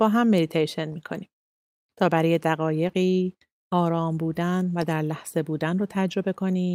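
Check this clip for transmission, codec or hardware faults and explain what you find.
There are two linked transmission faults, both timing problems rather than codec or hardware damage.

Clock drift between sender and receiver runs through the whole clip. The speech has a faintly unsteady, dragging pace. The sender's audio clock runs roughly 2% slower than the receiver's, so the jitter buffer keeps draining and the receiver must repeatedly stretch the audio to avoid running dry.

Repeated timing corrections run from 0.08 s to 6.43 s. They sound like small, irregular hiccups and a slight slowing of the tempo. Because the sender delivers too little audio, the receiver keeps inserting short repeated pieces, all lengthening the stream. This plays at about 99% speed and adds roughly a tenth of a second in total.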